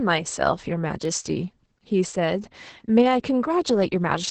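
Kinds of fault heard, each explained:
Opus voice compression: The low-rate linear-prediction voice coder removes everything above about 8.7 kHz and codes the excitation coarsely, leaving the speech muffled, hoarse and slightly robotic. The heavy damage points to a bitrate around 10 kbps.
Word clock ticks: A receiver running on its own clock, unlocked from the sender, drifts against it by a few tens of parts per million. Each slip misreads samples and drops or repeats one, giving about seven sharp ticks roughly every 0.7 s between 0.37 and 3.78 s.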